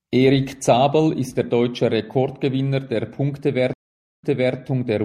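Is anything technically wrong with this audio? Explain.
Yes, two faults. Throughout the speech there is a watery, swirly coating, dulled treble and smeared s sounds, plainly audible. The likely cause is MP3 compression at a low bitrate, consistent with about 64 kbps: the encoder cuts the high frequencies and drops weak spectral detail that flickers frame to frame.

From 3.73 to 4.56 s the audio drops out for about 0.49 s, then resumes roughly 0.34 s earlier than where it stopped, repeating a short stretch. This is a stream reconnect: the connection broke, the player restarted its decoder mid-stream, and the server resent recent audio.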